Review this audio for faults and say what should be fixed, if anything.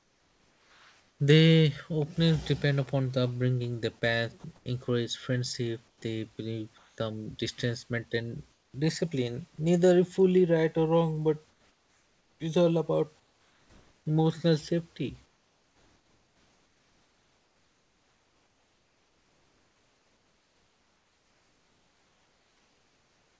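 Comfort noise in place of the background: in the pauses at 0–1.2, 4.56–4.66, 5.88–6.02, 6.78–6.98 (before "distance maintain discipline"), 8.52–8.74 (after "distance maintain"), 11.5–12.4, 13.2–14.06 and from 15.26 s (after "emotional safety") to the end, the room background turns into a flat, featureless hiss, mostly about 2 to 5 dB quieter and about 9 dB quieter at 5.88 s. The likely cause is discontinuous transmission: the sender stops sending during silence, and the receiver plays synthetic noise instead of the real room sound.

To prevent it, disable discontinuous transmission on the G.722 call path so the real background is sent continuously.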